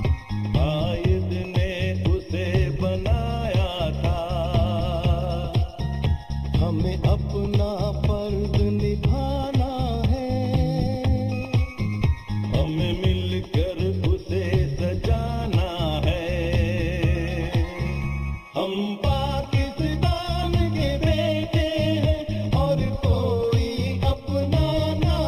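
Channel delay (comb filtering) runs through the whole clip: one channel arrives late by roughly a third of a millisecond, and summing to mono cancels shared content at evenly spaced frequencies, starting near 1.5 kHz and repeating upward, leaving a hollow, phasey tone.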